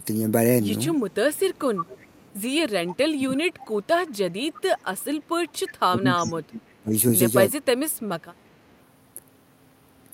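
A speech clip with two problems. There's an echo leak at 0.96–2.34, 4.07–5.04 and 5.5–5.73 s: a faint copy trailing by 345 ms, about 20–25 dB down, likely a far-end echo canceller letting loudspeaker pickup through. Then speech suppressed in double talk at 2.74–3.73, 5.89–6.93 and 7.51–8.19 s, where the voice drops by roughly 25–35 dB, likely because the canceller turned down the talker along with the echo while both sides spoke.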